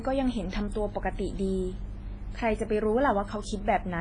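A low-bitrate transform codec, likely WMA compression, has squeezed the speech for its whole length. With long transform blocks and too few bits, the encoder smears quantisation noise across tens of milliseconds and discards weaker spectral detail, with damage heavy enough to point to a bitrate around 24 kbps. Nothing survives above 10.4 kHz. The result sounds dull, ringing and washy, with a hiss that swells and fades along with the speech.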